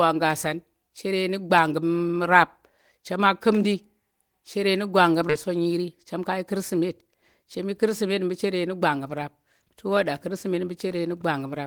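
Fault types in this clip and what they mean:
Skip ahead: right after "chere nu gwanggum", at about 5.29 s, the speech jumps forward with no gap, as if roughly 0.7 s of talk vanished and the two edges were butted together. A stretch was discarded while later audio already waited, pulling playback forward.
Jitter buffer speed-up: from about 5.98 to 7.03 s, ending just before "chem yi kirsimet", the speech runs about 6% fast with unchanged pitch, sounding slightly rushed. The receiver trimmed many pitch-period slivers, around 70 ms in total, to shrink an overfull buffer.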